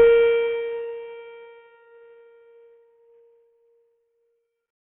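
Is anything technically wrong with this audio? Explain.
Yes. Throughout, the music sounds like heavy Bluetooth SBC compression, likely from a starved bit pool: nothing above 6 kHz, and coarse quantisation leaves gritty noise, pointing to roughly 48 kbps.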